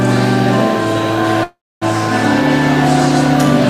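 At 1.43 s the sound turns into a fading buzz, then silence for about 0.27 s, resuming at 1.83 s with nothing lost: a call audio freeze, likely from delayed packets draining the jitter buffer.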